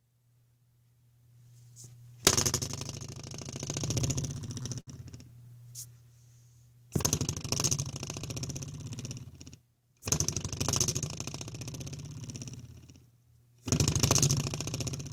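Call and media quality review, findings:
Repeated stalls (stutter), 4.13 to 4.89 s. Audio drags and catches five times in under a second. Roughly 115 ms of held-over sound fills the gaps, about 15% of that span. Longest hold 60 ms. No content lost. Probable component: receive jitter buffer. Packets arrived late or slower than playout, so the buffer drained repeatedly. Concealment extended the last sound each time until data resumed.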